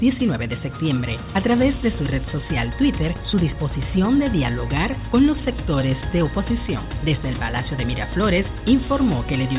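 No technical faults can be heard anywhere in the clip.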